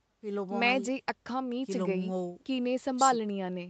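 No technical faults can be heard in this speech. The call path leaves nothing above 8 kHz, a band limit that fits an Opus codec running at around 32 kbps.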